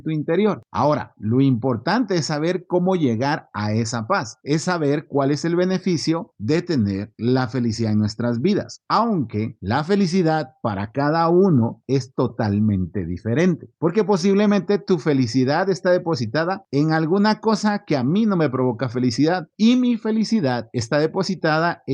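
Nothing stood out as a technical fault on listening to this speech recording.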